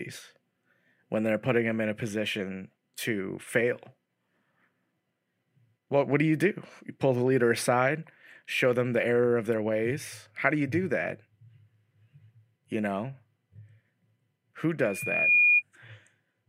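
A microphone in this speech recording is picking up the loudspeaker it feeds, and at one frequency the loop gain passes unity, producing loudspeaker feedback squeal from 14.79 to 15.63 s. The loop reinforces itself around 2.4 kHz, so a single piercing tone rises out of the speech, swelling over roughly half a second until it sits a few decibels above the talker before it stops.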